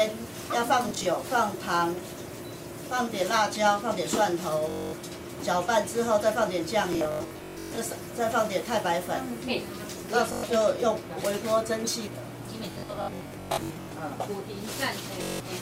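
Bluetooth stutter breaks in at 0.89–1.06, 4.70–4.93, 6.93–7.78, 10.33–10.43, 12.72–13.92 and 15.23–15.40 s. Packets arrived late or not at all, so the receiver kept replaying its last short slice. The result is a buzzing, machine-gun repeat rather than silence, worst across the scattered bursts at 6.93 and 12.72 s. Unlike a plain dropout, the sound then resumes further on, as though it had kept playing underneath.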